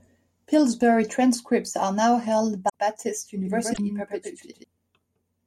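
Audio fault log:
2.65–2.75 s and 3.70–3.79 s, damaged data in a compressed stream: just after "transcripts are now held", and again inside the doubled passage, a brief glitch. Corrupt frames make the decoder lose sync and hunt for the next header. A spectrogram shows a short broadband smear and a break in the waveform.
3.45–4.64 s, doubled audio track: a full-band copy of the speech trails about a tenth of a second behind, a few dB quieter, with no decay or room colour, and it starts and stops abruptly. Two unsynchronised copies in an edit are the likely cause. The waveform shows repeated envelopes, and the spectrogram shows shifted, duplicated harmonic patterns.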